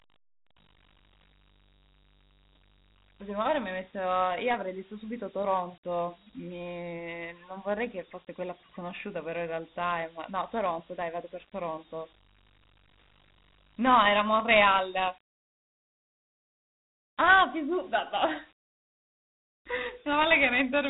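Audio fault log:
throughout, Dialogic VOX ADPCM: the audio has been squeezed into 4-bit adaptive differential samples, which fits the 32 kbps telephony rate used for VOX voicemail and phone-menu files, so each step guesses the next value from the last and rounds the error coarsely. That rounding is plainly audible as a gritty hiss riding on the speech, and with nothing above about 3.9 kHz, the voice sounds narrow, muffled and phone-like.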